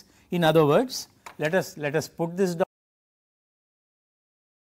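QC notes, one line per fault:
2.64 s to end: audio dropout to silence. The sound cuts off mid-flow and never returns; the final 2.13 s is silence with no room tone, likely because the input was lost while the recorder kept writing silence, so nothing after the cut survives.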